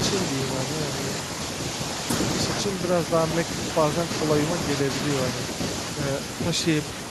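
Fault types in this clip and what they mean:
No fault types are present in this clip.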